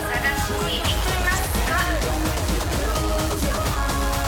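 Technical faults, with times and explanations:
2.10–2.13 s, loud pop: one sharp pop, a few decibels above the sound continuing beneath it, likely a sudden voltage pulse from a switch or static.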